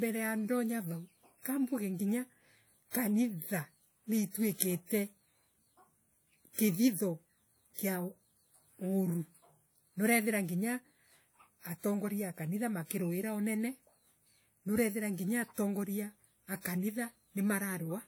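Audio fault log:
2.91 to 2.94 s, 6.53 to 6.58 s and 16.61 to 16.65 s, pre-echo: before a sharp onset in the speech, a short hiss rises for about 40 to 50 ms and the attack sounds blunted. The transform codec spread quantisation noise sized for the loud onset across its whole block, into the quiet gap before it. Unlike a true echo or reverb tail, this noise comes before the sound and is hiss, not a repeat of it.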